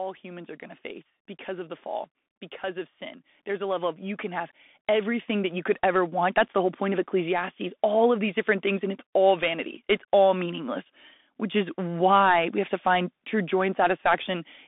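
Throughout, the speech carries Bluetooth CVSD headset codec damage: nothing passes above 3.8 kHz, sibilants sound scratchy, and granular hiss sits underneath, consistent with a 64 kbps CVSD link. From 0.21 to 5.68 s, automatic gain rising lifts voice and background together by about 13 dB as the control compensates for a quiet input.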